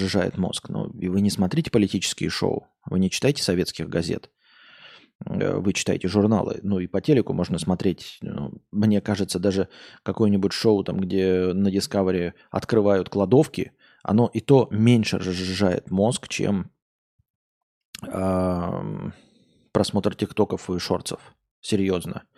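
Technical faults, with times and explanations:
No technical faults heard.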